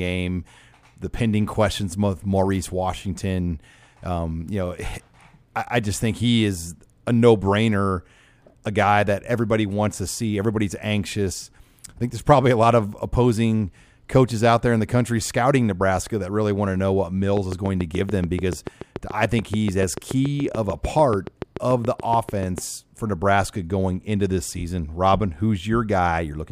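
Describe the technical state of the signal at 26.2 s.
At 26.2 s the signal is intact, with no audible fault at that moment.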